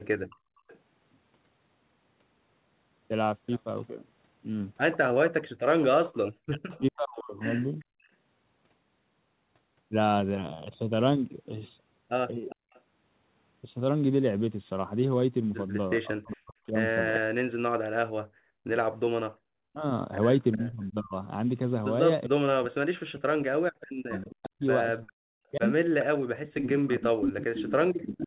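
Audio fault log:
0.30–0.79, 6.71–8.09, 12.49–12.81, 16.32–16.36, 20.52–20.58, 24.15–28.27 s: echo leak. A copy of the far side's speech returns 404 ms late, most likely residue the loudspeaker side's echo canceller failed to remove. It sits about 30 to 20 dB under the speech early on and grows to only about 5 dB below it from 24.15 s to the end.
0.36–0.67, 7.84–8.02, 12.56–12.67, 19.34–19.39 s: background gated by the echo canceller. While the far end's loudspeaker played, the canceller pulled the microphone right down, so the room sound drops out for about 300, 200, 100 and 50 ms. The dips reach about 34, 35 and 39 dB, and about 17 dB in the last.
6.46–7.36 s and 16.0–28.27 s: speech suppressed in double talk. With both sides speaking together, the canceller could not tell the near talker from loudspeaker echo and most likely attenuated both. The near voice falls by roughly 40 dB at its deepest, in pieces lasting about a second at first and then running to the end. 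Throughout, the narrowband call path cuts everything above 4 kHz.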